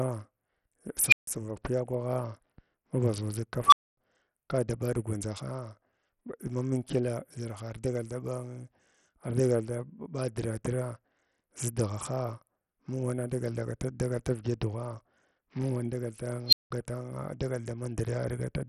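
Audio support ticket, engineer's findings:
Treble dropping out and flickering throughout the speech. Gritty grain and aliasing ride on the sound. Likely Bluetooth SBC compression, heavily damaged. A small bit pool starves the weak top bands of bits. The damage points to a low bitrate near 64 kbps. Component: wireless link codec.

Unstable filter, 1.07–1.27 s. Tone around 2 kHz swells in 49 ms, clips, then 150 ms of silence. Recursive filter with bad coefficients diverges and overflows until it resets.

Unstable filter, 3.66–3.97 s, just before "kada ɓa". Tone near 1 kHz builds over 59 ms, then cuts out for 250 ms. Same runaway feedback, then overflow.

Unstable filter, 16.48–16.71 s. Squeal near 4 kHz grows in 49 ms, clips, then 180 ms of dropout. Component: DSP filter stage.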